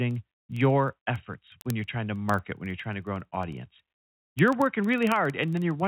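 Across this speech clip, a steady stream of sharp little ticks of uneven strength runs from 0.11 s to 5.85 s, coming roughly every 50 ms, well over a hundred in all. These are word clock ticks. The receiving device runs on its own clock rather than locking to the digital sender's, and with a mismatch somewhere around 500 parts per million, the clocks slip past each other again and again, each time dropping or repeating a single sample. The call-path band limit at 4 kHz, consistent with G.711 mu-law, is also audible.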